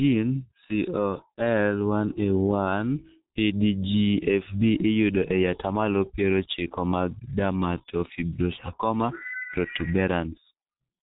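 Throughout the speech, G.723.1 codec damage is heavy. Nothing above 3.8 kHz survives, so voices sound muffled and hoarse, with smeared consonants, fitting a bitrate near 6.3 kbit/s.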